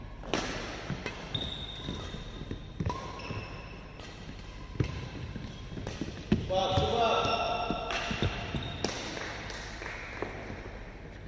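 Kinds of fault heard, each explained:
No technical faults can be heard in this audio. There is nothing to list here.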